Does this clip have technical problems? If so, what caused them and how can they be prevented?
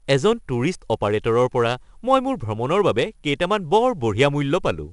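Yes. The speech carries 4-bit ADPCM compression throughout, plainly audible as a gritty hiss that rises and falls with the loudness of each sound and roughens sharp onsets where the adaptive step size lags behind. Nothing reaches above 10.6 kHz, which fits a reduced sample rate at roughly 88 kbps. Unlike steady background noise, this hiss vanishes in pauses. Unlike perceptual codecs, there is no swirling or warbling. Prevent it by storing or transmitting the audio as PCM or with a modern perceptual codec at adequate bitrate.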